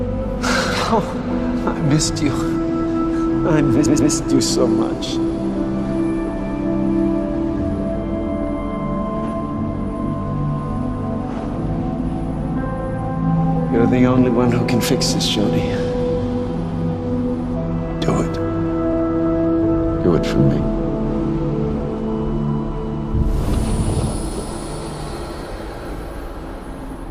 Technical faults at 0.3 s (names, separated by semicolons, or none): none